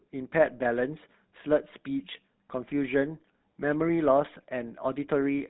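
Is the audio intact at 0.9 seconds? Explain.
No, GSM full-rate codec damage runs throughout, including 0.9 s. Sparse pulse-driven vocal-tract coding, fitting a 13 kbps stream, sounds buzzy and gravelly; spectrograms show nothing above 3.9 kHz.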